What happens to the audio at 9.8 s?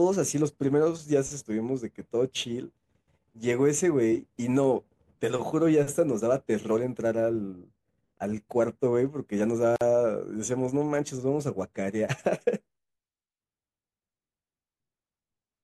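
At 9.76 to 9.81 s the speech halts for about 49 ms, a gap at a join of encoded pieces: encoder delay and padded silence left untrimmed, then it resumes exactly where it stopped, with nothing lost, unlike a dropout.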